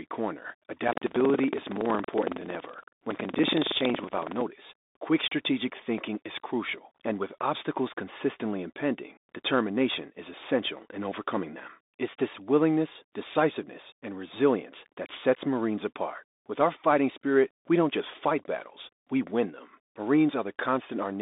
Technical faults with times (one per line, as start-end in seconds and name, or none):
0.00-21.22 Bluetooth CVSD headset codec
0.79-4.43 buffer tearing